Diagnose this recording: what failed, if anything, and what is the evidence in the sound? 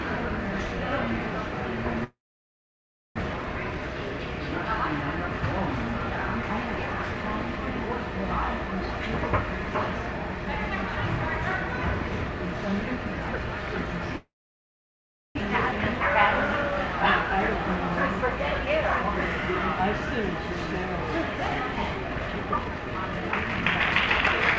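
Network stage: two long network dropouts, likely packet loss, at 2.04–3.22 s and 14.16–15.41 s; the last sound decays, then about a second of silence, and audio resumes with content missing.

Jitter buffer stage: jitter buffer speed-up after each gap, at 3.30–4.28 s (111%), 15.49–16.00 s (107%) and 16.48–19.04 s (105%); pace hurries, pitch unchanged, shedding the built-up delay.

Processing stage: a time-stretched section from 21.94 s to the end, sped up 1.64 times at constant pitch, sounding rushed, likely from software length-fitting.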